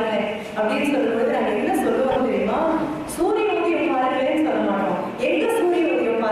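At 2.10 s the audio catches and stutters through 2.16 s: a case of repeated frames. A block of about 26.1 ms, which fits a single compressed frame, is played three times in a row instead of once. The decoder receives the same frame data again and simply reproduces it, so the same short slice of sound recurs. The duplicates lengthen the clip by 52.2 ms.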